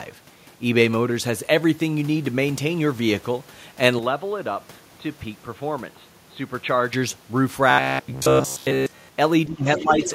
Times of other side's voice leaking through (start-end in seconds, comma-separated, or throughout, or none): 9.76-10.14